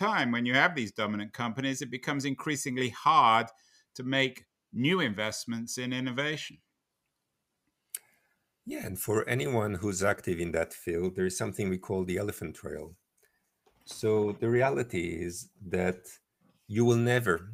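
No technical faults can be heard anywhere in the speech. Nothing points to a problem in how it was captured, processed or played back.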